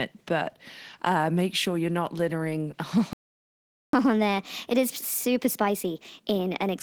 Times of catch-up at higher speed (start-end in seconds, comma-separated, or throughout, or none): 3.93-6.77